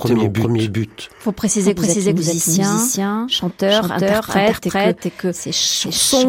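A speech recording with a doubled audio track running for its entire length. A second full-band copy of the speech trails the original by around 0.4 s at roughly the same level, so every phrase is followed by a clean repeat. The copy carries no decay or room colour, which rules out a natural echo. The likely cause is the signal being captured twice, once through a slower path, or an edit leaving two copies out of step.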